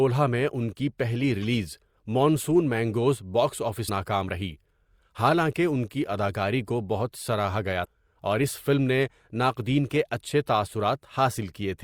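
At about 3.85 to 3.89 s there's a short burst of damaged data in the compressed stream, roughly 40 ms of it. A stretch of the encoded speech got corrupted, so the decoder couldn't read those frames properly, lost its footing and had to hunt for the next valid frame header before it could carry on. You hear it as a quick chirp, squawk, click or short hole that cuts across the speech.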